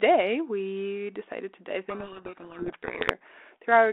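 From 1.9 to 3.12 s, right after "we decided to dive", a codec payload misread buries the speech in harsh distortion. The decoder reads G.726 code words with their bit order reversed.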